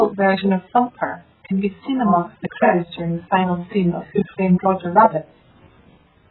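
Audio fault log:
throughout AAC compression, likely at about 8 kbps: speech stops dead above 4.1 kHz, with warbling, smeared sibilants that a simple low-pass filter wouldn't add.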